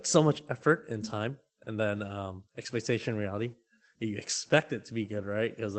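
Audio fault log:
2.07 s lost packet rebuilt from error correction: after "and time and then", one 20 ms frame turns rougher and noisier without any gap, unlike concealment's smeared or muted fill.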